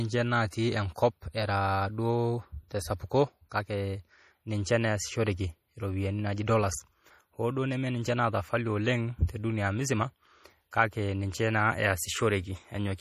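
From start to finish the speech carries what's most likely MP3 compression, and the damage is plainly audible. There's nothing at all above 15.2 kHz, a hard ceiling where the encoder dropped the treble to save bits, and the remaining detail has that watery, swirly quality you get when weak frequency lines flicker in and out between frames. It all fits a starved bitrate, something around 40 kbps.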